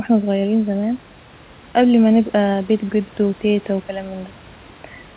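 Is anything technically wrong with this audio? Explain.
No, nothing here is technically wrong with this speech clip. What you hear is a narrowband call sound with nothing above 4 kHz, which fits the G.711 mu-law codec at 64 kbps, plus room noise sitting about 31 dB below the speech.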